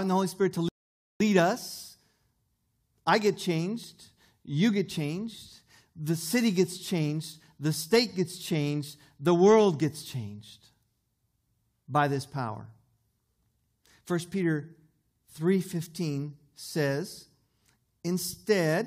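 A speech recording with a single rebuffering stall near the start: at 0.69 s the audio drops to silence and stays there until 1.20 s, when it picks up again from the exact point where it halted. The player exhausted its downloaded buffer and waited for more data. Because playback simply paused rather than skipping ahead, no speech is lost; the only effect is about 0.52 s of dead air inserted into the timeline.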